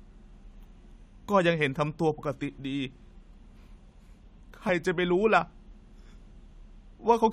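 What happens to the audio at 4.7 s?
At 4.68 s, compressed frames are skipped: about one frame, roughly 20 ms of audio, is never decoded, and playback jumps straight ahead by roughly 20 ms, with frames 23.2 ms long.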